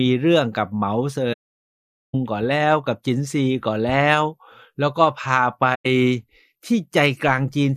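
AAC frame loss with muting occurs twice. From 1.33 to 2.15 s, a run of coded frames fails to arrive, which fits about 38 frames, and the decoder zeroes their spectrum, leaving roughly 0.81 s of silence in the speech. At 5.74 to 5.86 s, a shorter loss, consistent with about five frames, mutes roughly 0.11 s. Because the decoder's overlapping windows still blend neighbouring frames, each gap fades out and back in over a frame's length, giving soft-edged holes.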